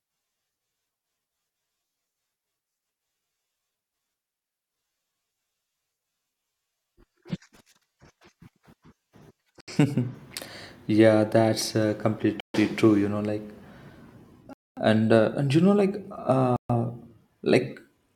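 At 9.61 s, 12.40 s (just after "yeah that's uh"), 14.53 s and 16.56 s the speech cuts to dead silence for 73, 139, 238 and 133 ms, then resumes. These are likely Bluetooth stalls, where the headphone buffer ran dry while delayed packets were resent. Unlike a click or crackle, each gap is a complete silence.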